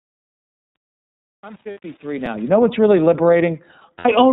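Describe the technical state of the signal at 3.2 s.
At 3.2 s the iLBC codec damage is plainly audible: each 30 ms frame is coded independently, so the speech sounds rough and synthetic, and a spectrogram shows nothing above 4 kHz.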